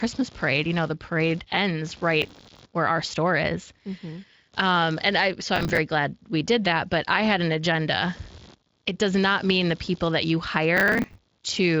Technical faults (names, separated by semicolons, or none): computer activity noise; processor overload crackle